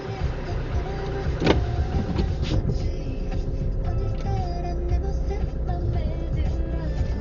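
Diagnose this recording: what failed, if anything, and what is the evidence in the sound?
The sound is dull and boxed-in from start to finish, with nothing present above 7 kHz, and the tonal parts carry a rough, fluttering grain around them. The failure sits at the codec stage, likely Dolby Digital compression run at a very low rate; the damage is heavy enough to fit a bitrate around 40 kbps. Starved of bits, the encoder cuts the top of the band and leaves many frequency lines with no mantissa data, so the decoder fills those gaps with dither noise.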